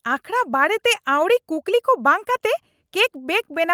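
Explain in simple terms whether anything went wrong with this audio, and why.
Nothing went wrong here; no technical fault can be heard anywhere in the speech.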